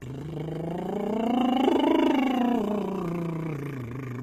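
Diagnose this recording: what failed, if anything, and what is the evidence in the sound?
HE-AAC compression at the codec stage, throughout: the music's treble sounds gritty and metallic, ending near 14.8 kHz, likely spectral band replication at a low bitrate around 20 kbps.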